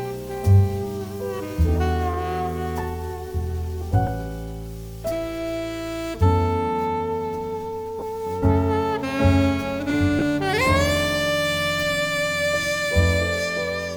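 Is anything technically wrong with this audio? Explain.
Yes. Bluetooth LE Audio frames were lost three times: briefly at 4.07 s, then from 7.99 to 8.03 s and from 10.19 to 10.22 s. The first gap is 10 ms, which fits a single LC3 frame; the later two last 30 ms, which points to about three frames each. The decoder filled each hole by repeating the last spectrum with scrambled signs, so each gap is filled with a short stretch of noise-like sound. The light lossy compression on the clip is a separate, ordinary trait.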